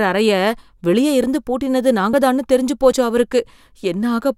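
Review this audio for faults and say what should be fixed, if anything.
Jumps in the speech occur at 1.24, 2.13 and 2.92 s, each skipping about 10 ms, 10 ms and 20 ms with no gap of silence. This is likely a dropped buffer (overrun): unread input was overwritten, splicing the edges together. Enlarging the input buffer or raising the capture thread's priority would prevent it.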